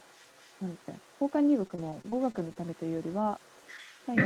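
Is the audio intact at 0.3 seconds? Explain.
No. From 0.0 to 4.25 s, another voice leaks through faintly, well below the main speech. This is the other side's voice leaking through. Its likely cause is loudspeaker playback that the echo canceller did not fully remove from the microphone.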